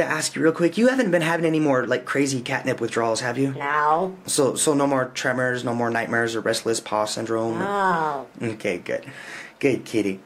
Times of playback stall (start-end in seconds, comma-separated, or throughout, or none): none